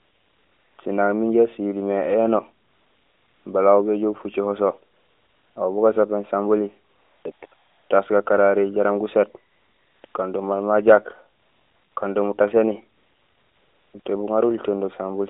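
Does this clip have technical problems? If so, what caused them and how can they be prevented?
Yes. AMR comfort noise fills twelve pauses between 0.0 and 14.06 s. The gaps run from 60 to 960 ms, and the longest is at 12.98 to 13.94 s. In each gap the phone decided the talker was silent and stopped sending speech frames, so the receiver generated a smooth, steady noise from a rough description of level and spectrum. That substitute switches in and out against the real background. It can be prevented by disabling discontinuous transmission on the call, or by making the voice activity detector less aggressive so short pauses keep real frames.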